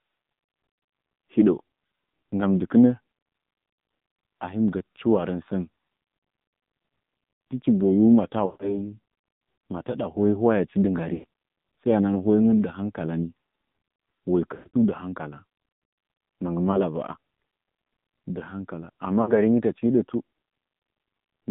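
Speech heard through the AMR narrowband mobile codec. Nothing passes outside roughly 150 Hz to 3.7 kHz, and the voice sounds plainly buzzy and synthetic. That level of damage fits a low rate near 7.4 kbps. Lost AMR speech frames cause gaps at 8.46–8.76, 11.14–11.26, 14.54–14.77, 16.72–16.80 and 19.22–19.34 s. The decoder stretches the last good sound and fades it out. The longest loss is about 180 ms, spread over 14.54–14.77 s. The shortest is a brief dip at 16.72 s.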